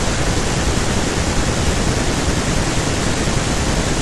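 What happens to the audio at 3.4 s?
Nothing goes wrong at 3.4 s: the speech runs on intact there, with no dropout, click or distortion.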